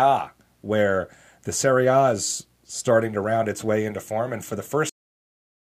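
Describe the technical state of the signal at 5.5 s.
At 5.5 s the signal is digital silence, within a cut-off end running from 4.89 s to the end of the clip. The speech stops abruptly mid-sound with no decay, because the final buffers were never written or played out, leaving only silence after the cut.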